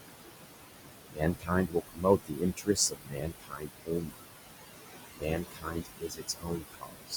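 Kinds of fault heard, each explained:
Noise suppressor artifacts: The suppressor is pulling down whatever it reckons is steady background, by about 20 dB, and it does this frame by frame across the whole clip. The room noise, which sits only about 8 dB under the speech, drops away in the gaps and creeps back up under the talking.
Speech cut by the noise suppressor: Here the suppressor is mistaking parts of the speech for noise and turning them down along with the background. It happens from 1.12 to 4.28 s, with the deepest dip at about 22 dB and around two seconds of speech affected in total. It happens again from 5.15 to 7.14 s, dipping about 21 dB over roughly a second and a half. In those stretches the softer bits sound swallowed and faint.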